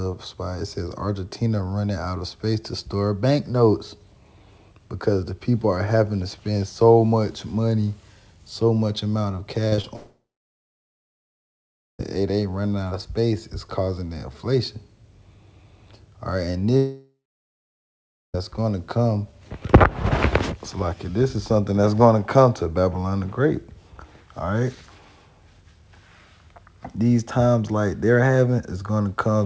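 Between 9.68 and 9.86 s, three quick smears or wobbles (at 9.68 to 9.74, 9.76 to 9.80 and 9.82 to 9.86 s) are short concealed packet loss: tens of milliseconds missing, patched by extending the preceding sound. Right after, from 9.96 to 12.01 s, the sound turns into a fading buzz and then about 1.8 s of silence, likely a long network dropout in which the lost audio was never played. The same happens from 16.77 to 18.37 s, with about 1.2 s of silence. Throughout, nothing is heard above 8 kHz, which fits a G.722 call codec at 64 kbps.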